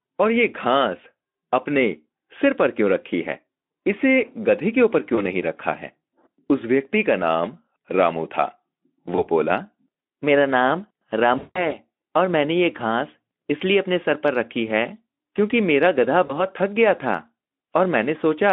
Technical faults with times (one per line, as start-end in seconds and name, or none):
5.15-5.23 VoIP packet loss concealed by the speech codec
9.15-9.28 VoIP packet loss concealed by the speech codec
11.37-11.76 VoIP packet loss concealed by the speech codec
16.25-16.41 VoIP packet loss concealed by the speech codec